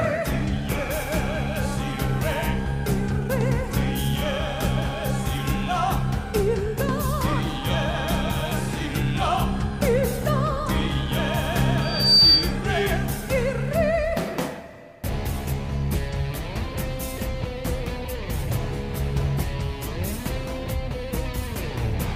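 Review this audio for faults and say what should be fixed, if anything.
Loudspeaker feedback squeal from 11.81 to 12.56 s: a single tone at 4.6 kHz swells over roughly a third of a second until it sits around 10 dB above the rest of the sound. The microphone is hearing the loudspeaker it drives, and at that frequency the loop gain has crept past one, so the tone feeds itself and grows. To prevent it, lower the monitor gain, move the speaker out of the microphone's pickup, or notch 4.6 kHz.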